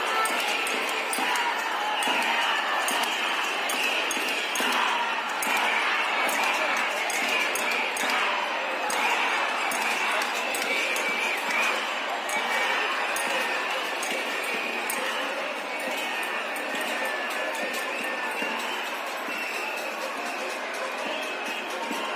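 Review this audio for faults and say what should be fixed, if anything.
Nothing to fix: no audible faults anywhere in the recording.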